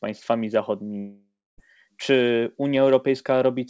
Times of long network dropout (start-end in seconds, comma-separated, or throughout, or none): 0.98-1.60